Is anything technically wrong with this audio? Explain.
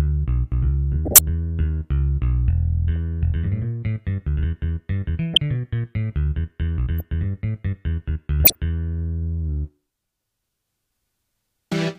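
Yes. Corrupt frame decoded at 1.05–1.20 s, 5.34–5.38 s, 6.99–7.01 s and 8.44–8.60 s. Flipped bits in compressed frames were decoded anyway, throwing energy into wrong frequencies. This gives chirping noise bursts, with the one around 7.0 s much quieter.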